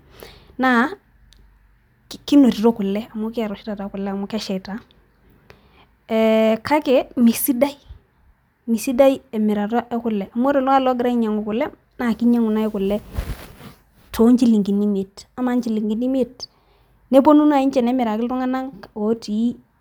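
Nothing goes wrong anywhere in this speech recording, so there's no technical fault to point to at any moment.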